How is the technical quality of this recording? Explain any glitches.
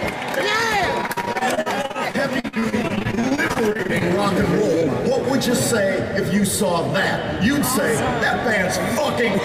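The recording has one clear glitch, confined to the first few seconds.

Repeated packet loss (robotic sound), from 1.01 to 4.02 s: dozens of brief dropouts, the longest about 47 ms, were each patched by stretching the preceding sound. Concealment covers roughly a quarter of that stretch, so the audio turns choppy, with fragments missing.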